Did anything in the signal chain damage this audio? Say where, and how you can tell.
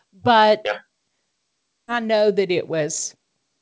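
Yes. At the network and jitter-buffer stage there is a skip ahead at 1.88 s: roughly 0.7 s of speech is missing, and the two sides are butted together with no fill, so playback lurches forward and latency drops by about that much. On a waveform you see an abrupt splice where the envelope and pitch contour change instantly. On a spectrogram, formant tracks break off and restart mid-trajectory with no silence or smear between them.

Right after that, from 1.98 s to 3.37 s, there is a jitter buffer speed-up. The receiver still held surplus audio and trimmed many small pitch-period chunks, removing something like 70 ms in total. Speech runs about 5% fast while its pitch stays put, so it sounds slightly hurried. On a spectrogram the harmonics stay at the same height while syllables are compressed in time. The waveform shows periodic cycles quietly missing. The G.722 call path is band-limited, with nothing above 8 kHz.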